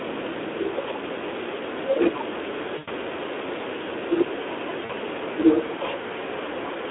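The whole speech clip carries the Speex codec's damage: a hoarse, grainy texture with plainly audible artefacts, which fits a low setting around 11 kbps. The band sits roughly between 250 Hz and 3.6 kHz, so everything sounds boxed-in and phone-like.

From 2.77 to 2.90 s there's VoIP packet loss concealed by the speech codec. The decoder keeps repeating its last pitch and filter shape while fading the gain, so you hear the sound stretched out and fading, consistent with about five 20 ms frames lost. At 4.85 to 4.93 s a shorter gap does the same, and it sounds like roughly two frames went missing.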